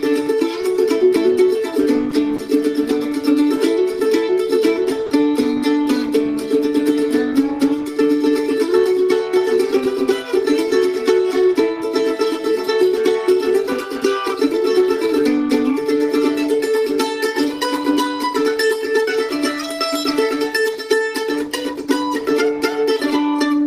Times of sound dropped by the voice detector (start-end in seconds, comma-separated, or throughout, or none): 2.10, 2.36-2.38, 5.06-5.10